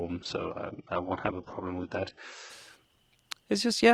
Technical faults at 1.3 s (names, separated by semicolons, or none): adaptive stream starting at a low bitrate